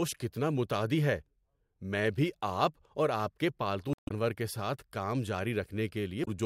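Speech, with damaged data in a compressed stream at 3.93–4.11 s, between "اور آپ کے پالتو" and "کے ساتھ کام", and at 6.21–6.28 s. Corrupted frames throw the decoder out of sync while it searches for the next frame header, heard as a brief chirp, squawk, click or short hole.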